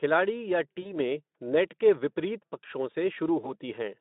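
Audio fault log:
0.81–0.95 s and 3.41–3.54 s (just after "के विपरीत पक्षों"), VoIP packet loss concealed by the speech codec: about 40 ms and 20 ms of audio lost, the decoder stretches the last pitch and filter into a fading buzzy tone or coloured noise instead of falling silent, then recovers weakly.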